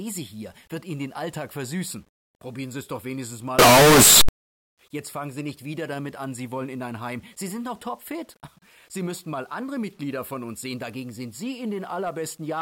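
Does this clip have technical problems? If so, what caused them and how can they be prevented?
Yes. From 3.59 to 4.29 s the audio was likely read with signed and unsigned mixed up, which fits 8-bit samples being handled under the wrong convention. Flipping the top bit of each sample turns every zero crossing into a jump across the whole range, so for that stretch the sound becomes very loud, harsh distortion in which soft passages come out as loud as strong ones. To prevent it, make sure every stage declares and checks whether 8-bit samples are signed or unsigned before converting them.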